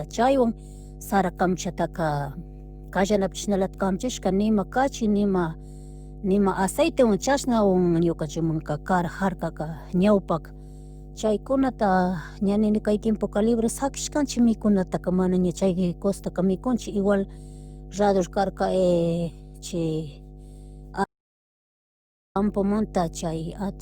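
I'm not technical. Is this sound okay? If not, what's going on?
No. There is mains hum under the whole recording. It is a steady low buzz at 50 Hz, fairly noticeable behind the speech. It comes from the mains power leaking into the audio, often through a ground loop or nearby transformer.

There is also an audio dropout to silence from 21.04 to 22.35 s. The sound stops dead for about 1.3 seconds, with no background noise at all. The likely cause is the input being lost, so whatever was said then is gone.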